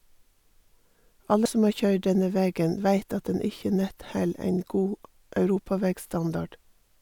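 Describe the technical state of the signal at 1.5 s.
Damaged data in a compressed stream hits at about 1.46 s, just before "som har køyrd denne": corrupted bytes make the decoder misread a frame and lose sync, giving a short blip. A spectrogram shows a thin broadband vertical stripe; the waveform shows a brief discontinuity.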